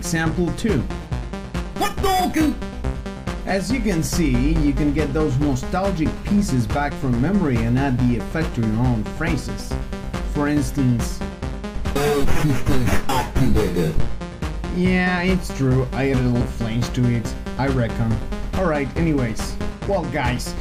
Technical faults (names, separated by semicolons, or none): damaged data in a compressed stream